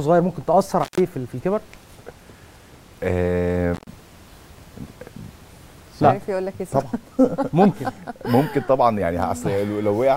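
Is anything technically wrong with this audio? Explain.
Yes, there is intermittent contact twice: 0.83–1.00 s and 3.74–3.88 s. A loose connection briefly opens for about 128 ms, then 116 ms, leaving faint hiss. Unlike a clean digital dropout, the gaps have crackle at their edges.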